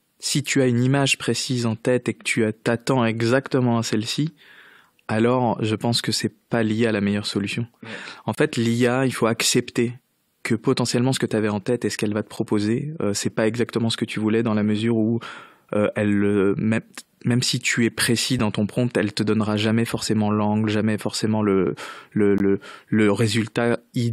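Around 8.35 to 8.38 s there's a gap between stream segments, a hard-edged hole of about 25 ms of pure silence. It happens again at 12.36 s right after "ce qu'elle va te", at 18.39 s between "si tu es précis" and "dans ton prompt elle", and at 22.38 s. These are shorter dropouts of roughly 6 to 18 ms. They all land near even-second boundaries, which fits 2-second segments whose timestamps don't quite meet. The player pads each seam with silence. Nothing is lost, but you hear little clicky holes.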